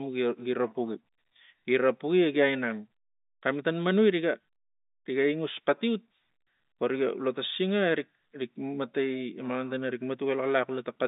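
Nothing goes wrong anywhere in this speech clip; it just sounds like an ordinary call over G.711 telephone coding, with the line band running from about 200 Hz up to 3.7 kHz.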